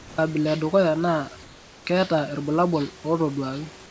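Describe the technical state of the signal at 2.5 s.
At 2.5 s the signal is intact, with the speech passing cleanly through the G.722 call path and its 8 kHz band limit, and the room noise sitting about 25 dB below it.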